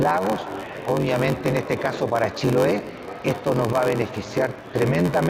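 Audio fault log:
throughout, block size mismatch (padded): steady 93.8 Hz buzz, sound running at 0.861 speed with timbre unchanged; shorter blocks are zero-filled, which fits 512-sample reads.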